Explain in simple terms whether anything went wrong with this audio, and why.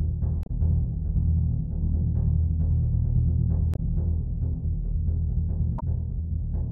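Three short glitches in the music, at 0.43 to 0.50 s, 3.72 to 3.79 s and 5.76 to 5.83 s, come from damaged data in a compressed stream. Bits of the file were garbled there, so the player briefly lost its place before recovering.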